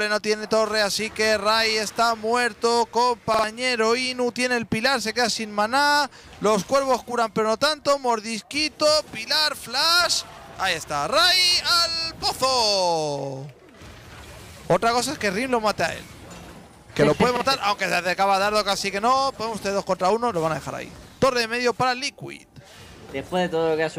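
At 3.34 s a repeated buffer occurs: one block of about 46 ms, consistent with a 2048-sample buffer, plays three times in a row with a hard join at each restart. This stutter runs to 3.44 s and costs roughly a tenth of a second of audio. At 17.37 s the same fault recurs more briefly, the block sounding twice and about 50 ms going missing. Both point to fresh data reaching the output too late.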